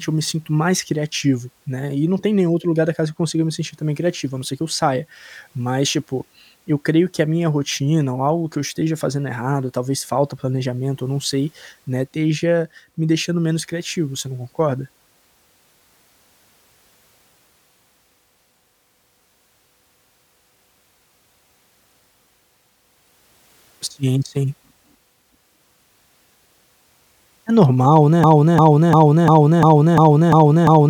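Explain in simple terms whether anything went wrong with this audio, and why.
Something does go wrong near the end. From 28.24 s to the very end, the speech turns into a broken-record loop: one short piece, about 0.35 s long, plays eight times in a row, each copy exactly the same. What tells it apart from an echo is that an echo fades and overlaps, while this repeats at full strength with nothing new in between. The likely cause is a player or stream that stalled and kept resending its last fragment, so whatever should have followed is lost.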